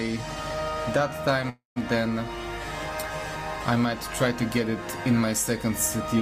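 At 1.49 s there's a call audio freeze that runs to about 1.78 s. The last bit of sound gets stretched into a buzzy, fading tail, then drops to silence for about 140 ms before things pick up right where they left off. That's likely packets stalling in transit and the jitter buffer running dry. About 266 ms gets filled in, nothing's actually lost, and everything after lands that much later.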